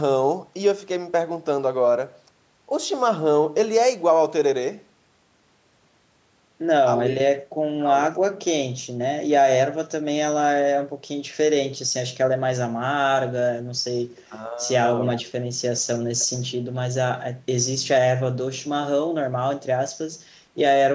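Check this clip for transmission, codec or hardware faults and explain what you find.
Two short bursts of echo leak stand out, at 14.16 to 14.25 s and 16.19 to 16.27 s. The likely cause is a far end playing the call on a loudspeaker, where the echo canceller failed to fully subtract what its microphone picked up and returned the residue. Each burst is a faint, roughly 0.3 s delayed copy of the speech, about 30 dB below the speech the first time and about 25 dB below it the second.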